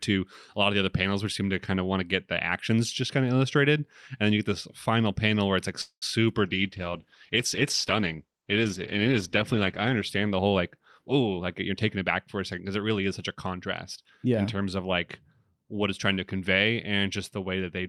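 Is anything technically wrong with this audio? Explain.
Yes, there are three faults in this speech clip.

From 5.81 to 6.04 s, just after "panel where it's like", there is a call audio freeze. Delayed packets likely drained the jitter buffer, so the receiver stretched the last sound into a fading fill of about 205 ms, with around 90 ms of that silent. Speech resumes where it stopped, with nothing lost.

From 6.45 to 11.56 s there is a call bitrate drop. The encoder fell from 64 kbps to 13 kbps and stayed at the lowest rate for about 3.3 s. With so few bits, the coding turns coarse and the top end is trimmed, so the speech sounds rough and muffled until the rate recovers.

From 11.20 to 13.54 s there is a jitter buffer speed-up. The buffer held more audio than its target, so the receiver repeatedly cut pitch-period-sized pieces, about a fifth of a second in total. Speech runs at roughly 108% speed at unchanged pitch and sounds hurried.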